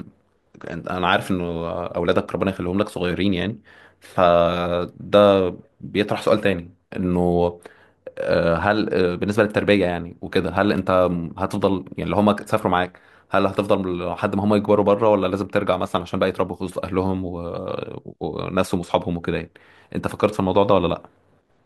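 No technical faults can be heard anywhere in this recording.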